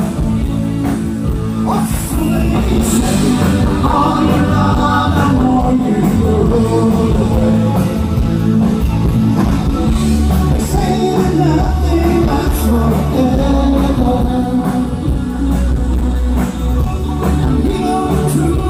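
No technical faults are audible.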